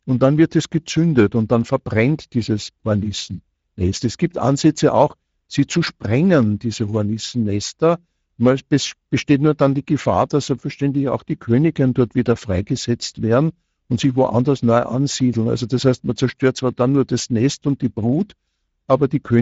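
From start to finish the speech has a plainly audible rough, hoarse, noisy texture, and the top end stops abruptly at 7.7 kHz, with the highest band sounding more like hiss than detail. This is Speex codec damage. The CELP encoder rebuilds the voice from a predicted excitation, and at a rate that suggests around 17 kbps it has too few bits to model that excitation accurately, so grain remains.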